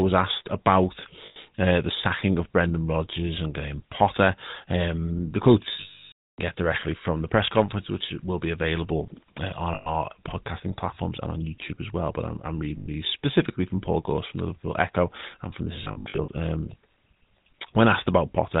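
Throughout the speech, plainly audible GSM full-rate codec damage: at 13 kbps the voice is rebuilt from a vocal-tract model driven by sparse, regularly spaced pulses. The result is a buzzy, gravelly texture with nothing above 4 kHz.

Lost GSM frames occur at 1.26–1.37 s after "asked about", at 5.8–6.4 s after "the quotes" (this one fades to silence), at 9.74–9.89 s, at 12.78–12.88 s after "I'm I'm", and as scattered short dropouts across 15.84–16.28 s. In each, the last good frame repeats as a metallic ring.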